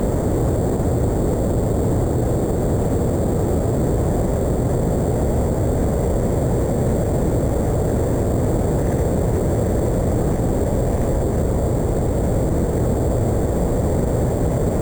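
Throughout, imaging from sample-and-hold upsampling adds a bright metallic fizz that follows the sound's level. Samples were repeated without smoothing, which fits an 8 kHz source raised to 44.1 kHz. A spectrogram shows a mirrored band from 4 to 8 kHz, about 23 dB down.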